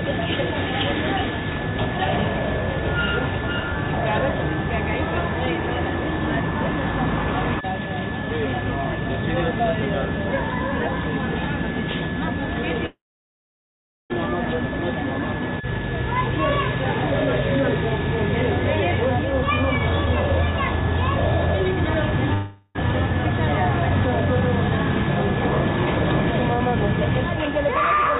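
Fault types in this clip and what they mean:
Long network dropout: incoming audio likely stopped, so at 12.86 s a fading buzz gives way to 1.1 s of silence; 22.34 s loses 0.4 s to fading buzz.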